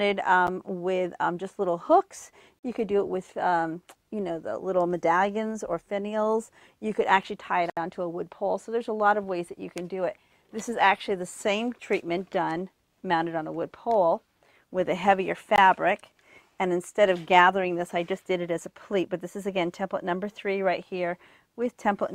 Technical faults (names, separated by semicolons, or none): block of digital silence